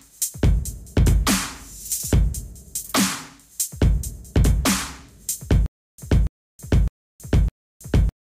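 Stutter with silent gaps runs from 5.66 s to the end of this sound clip. A 285 ms burst repeats four times, each followed by about 322 ms of digital silence, every 608 ms, likely from a stalled stream replaying its last fragment while the intended audio is lost.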